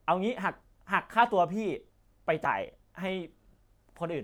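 A speech clip with one fault: damaged data in a compressed stream from 2.42 to 2.47 s. The decoder loses sync on the corrupted frames, producing a brief glitch that shows as a jagged discontinuity in the waveform.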